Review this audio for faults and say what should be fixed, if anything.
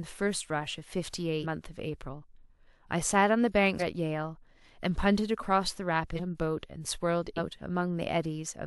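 The speech jumps ahead at 1.42, 3.79, 6.16 and 7.36 s. These are compressed frames skipped: runs of roughly 0.4, 0.7, 1 and 0.4 s of audio are lost, consistent with frames of about 46 ms being dropped as missing or damaged. To prevent it, store and transfer the file with integrity checks, and re-encode it from an intact source.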